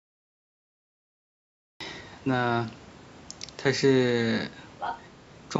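The clip opens with a cut-off start. There's dead digital silence from 0 to about 1.80 s, and then the speech just appears at 1.80 s, already mid-sound, with no natural onset or fade-in. That's what you get when capture or the stream began late and grabbed the talker partway through, so the first bit of the utterance is simply missing.

Then, from 4.79 to 4.99 s, there's a short burst of the other side's voice leaking through. For about a fifth of a second a second voice sits in the mix, only a little quieter than the main speech. The likely cause is the far end playing out of a loudspeaker on the talker's device, with the echo canceller letting a scrap of it back into the microphone. The band-limiting to 8 kHz on top is just the call's normal mic processing.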